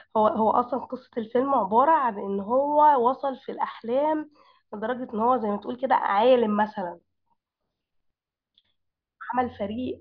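No technical faults are audible anywhere in this speech recording.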